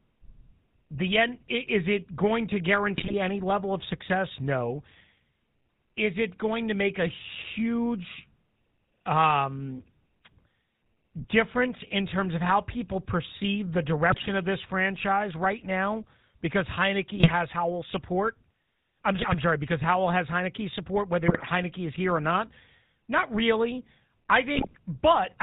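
GSM full-rate codec coloring runs through the whole recording: the speech is rebuilt from a vocal-tract filter driven by sparse, regularly spaced pulses, with nothing above 4 kHz. This gives a plainly audible buzzy, gravelly roughness that fits the 13 kbit/s full-rate coder.

GSM bit errors then break in six times, at 2.98–3.14 s (between "it going to" and "any level of success"), 14.10–14.31 s, 17.16–17.31 s, 19.18–19.35 s, 21.28–21.45 s (just before "is here or not") and 24.54–24.77 s (after "really I"). Corrupted filter, pitch and gain values distort a short run of frames, so each burst comes out as squawks, pops and gargling.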